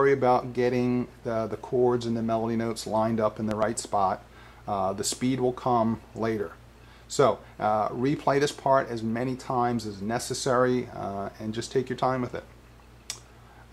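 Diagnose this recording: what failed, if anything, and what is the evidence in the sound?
A loud pop fault occurs between 3.51 and 3.65 s. Two sharp pops come in quick succession. They peak about 15 dB above the surrounding sound. The audio carries on underneath without a gap. So something was added to the signal, and nothing was lost. The stage is likely the analogue wiring, from a disturbed plug or a switch. A voltage step enters the line. The circuits after it shape that step into a short, loud pulse.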